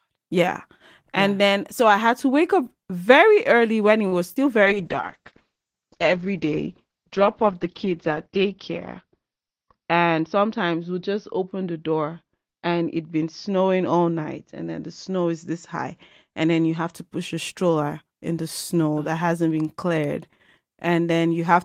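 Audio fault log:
4.07–4.14 s, short stall from a late packet: just after "very early when it", a packet arrived late and the jitter buffer ran dry, so the receiver held the last sound for about 43 ms until the packet turned up, then resumed from the same point. Nothing is lost, but the sound is drawn out for a moment with a faint buzzy sustain, and the playout delay grows by that same 43 ms.
4.34–4.38 s, short concealed packet loss: after "early when it was", 20 ms of audio never reached the decoder. The receiver covered the gap by extending the preceding sound, pitched if voiced and as shaped noise if not, then crossfaded back into real audio. The result is a brief smear or wobble, and a short consonant in that span can drop out entirely.
4.65–16.99 s, call bitrate drop: the bandwidth estimate fell and the encoder went from 32 kbps to 8 kbps, staying at the lowest rate for about 4 s. At that rate Opus codes coarsely and narrows the audio band from 20 kHz to 6 kHz, so the sound turns muffled and watery, losing its sibilance and air, until quality returns before "push a stroller in".
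9.06–9.57 s, jitter buffer speed-up: inside the low-bitrate stretch, the buffer held more audio than its target, so the receiver trimmed short pitch-period-length pieces repeatedly, roughly 50 ms in all. Playback runs at about 108% speed with unchanged pitch, making this half-second sound a little hurried.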